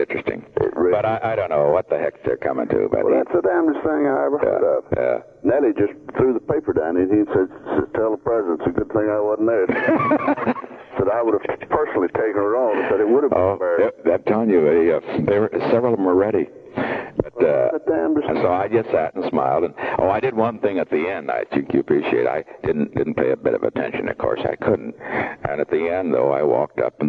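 Listening closely, nothing in the audio stood out as a technical problem at any point.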